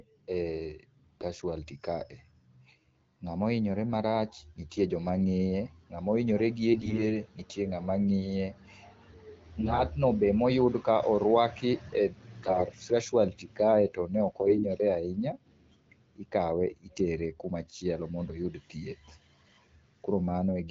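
AMR bit errors at 6.70–7.17 s (after "nga'ma ohinyore"), 9.60–9.80 s, 12.43–12.64 s and 14.40–14.66 s (after "kae to ne"): flipped low-priority frame bits misplace excitation pulses, so speech turns hoarse, scratchy and gargly.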